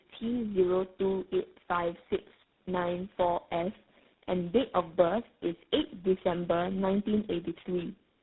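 Speech, affected by tandem speech coding throughout: three speech coders in a row each re-encoded the last one's damage, likely a G.729A, G.726 and GSM full rate chain, leaving it rough, muffled and warbly. A spectrogram shows nothing above 3.9 kHz and smeared, blotchy harmonics.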